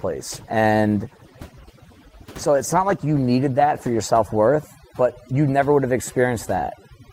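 Throughout the clip, overdone noise removal is at work. A noise reducer set far too aggressively on a noisy source has pulled individual frequency bands down or out whenever they came close to its noise estimate, taking the quieter parts of the speech along with the noise. Between phrases the background drops to an unnatural near-silence dotted with twinkling, chirpy specks.

From 0.0 to 4.0 s there is also an adaptive stream starting at a low bitrate. The player began on a cheap rendition of the stream to get playback going quickly, then switched to a better one once it had gauged the connection. For those first four seconds the treble is dull and partly synthetic and codec smearing is heavier, which fits Opus at around 16 kbit/s. At 4.0 s the sound abruptly sharpens with no gap, consistent with a step up to roughly 64 kbit/s.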